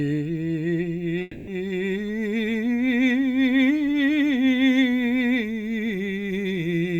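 A long network dropout is the likely cause of the break at 1.21 s: no audio packets reached the receiver for roughly a quarter of a second, and that stretch of music was never played. Instead, from 1.21 to 1.49 s, about 260 ms, the receiver keeps extending the last sound it had, so the music turns into a buzzy, fading hiss. No true silence follows. The music resumes at 1.49 s, further on, with the missing section skipped.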